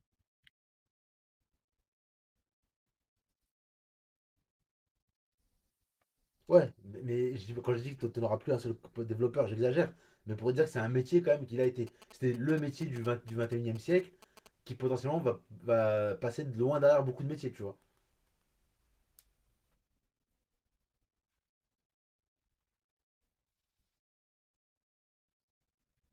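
From 11.64 to 14.47 s there's GSM signalling burst interference: a nearby 2G phone firing short radio bursts that the audio circuit rectifies, giving that galloping dit-dit-dit of short buzzes at 217 Hz, sitting roughly 20 dB under the speech, on top of the light Opus coding.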